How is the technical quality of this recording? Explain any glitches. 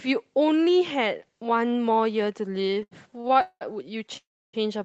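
The recording has two call-network glitches in its second half, both adding gaps rather than losing audio. It carries the coded, band-limited character of a call codec, with content stopping around 8 kHz, which fits Opus at a low bitrate near 20 kbps.

Between 2.55 and 3.63 s the speech catches and drags in a string of repeated stalls (stutter): fourteen short hiccups, the longest about 0.2 s. Together they fill roughly 0.43 s, about 40% of that stretch. Packets were arriving late or more slowly than they were played out, so the jitter buffer kept running dry. Each time, the receiver extended the last sound, fading it on the longer waits, then resumed without dropping anything.

From 4.17 to 4.55 s the audio stops dead for about 0.36 s. A brief continuation of the last sound fades out, leaving roughly 0.31 s of silence before the speech picks up exactly where it left off. This is a call audio freeze, likely caused by packets held up in transit until the jitter buffer emptied. 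Nothing is missing, but the delay inserts an audible gap.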